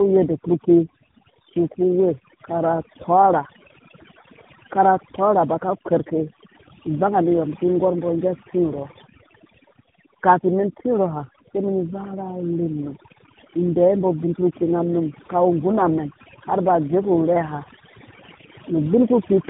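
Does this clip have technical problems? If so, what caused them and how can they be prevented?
Yes, two problems run through the whole clip. The overdone noise removal pulls the background down with little twinkling specks left behind, and quieter parts of the speech sitting near the noise level get cut along with it. Backing off the reduction strength, or cleaning up the noise at the source, would avoid that.

There's also tandem speech coding. The roughness, muffling and warble fit three narrowband speech codecs in a row, something like GSM full rate twice and then AMR-NB, with nothing above 3.8 kHz. Each stage re-encodes the previous one's damage. Routing the call to skip needless transcoding, or keeping one codec end to end, would prevent it.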